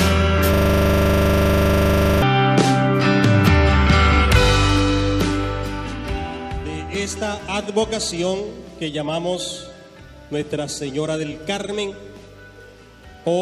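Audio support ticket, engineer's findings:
System hang loop, 0.54–2.22 s: 40 ms segment repeats exactly, roughly 42 times, giving a 25 Hz buzz. Frozen driver while the card kept cycling a 40 ms ring buffer. Waveform shows identical tiled 40 ms blocks; spectrogram shows 25 Hz-spaced comb lines.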